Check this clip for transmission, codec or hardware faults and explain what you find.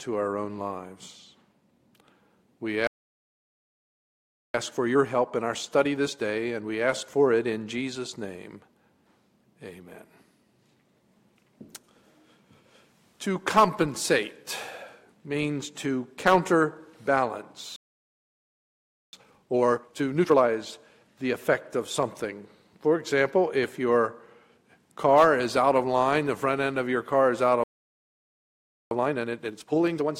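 Three playback stalls, each followed by time-compressed catch-up, are the faults here. The stalls fall at 2.87–4.54 s, 17.76–19.13 s and 27.64–28.91 s, silences of about 1.7, 1.4 and 1.3 s. The sound cuts off mid-flow, most likely because the player starved of data or its thread blocked. The waveform shows flat gaps, and the spectrogram shows blank vertical bands.

Time-compressed catch-up follows each gap: 4.54–7.54 s at 1.15 times speed, then 19.13–20.49 s and 28.91–30.17 s at 2 times. The player trims its backlog by splicing out short pieces, so the audio rushes at unchanged pitch. The spectrogram shows denser events with small periodic seams.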